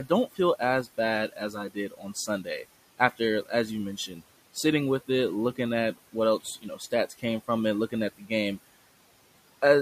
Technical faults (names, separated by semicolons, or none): noise suppressor artifacts; speech cut by the noise suppressor